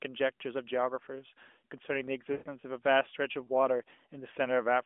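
At about 2.32 s the speech hits lost AMR speech frames for roughly 140 ms, which fits seven 20 ms frames failing their checks. The decoder stretches the last good sound with falling gain, so it smears and fades out, then returns thin and rough at 2.48 s.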